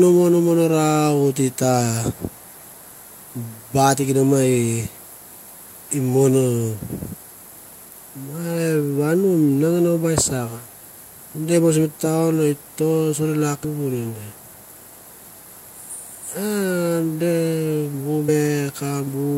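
Speech with damaged data in a compressed stream: brief glitches at 4.97, 13.63, 16.19 and 18.28 s where the decoder lost sync.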